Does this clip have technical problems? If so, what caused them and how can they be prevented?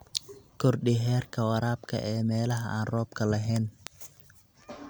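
Yes. The speech has two bit error spikes: a single-sample tick at 2.51 s, between "heerka waraabka ee" and "aan roobka lahayn", and a three-sample tick at 3.87 s, just after "aan roobka lahayn". A flipped bit pushes the sample value up or down by a power of two, and the next sample snaps back. Unlike a dropout click, no audio goes missing and the tick ignores the signal's level. Error-checked storage and links prevent it.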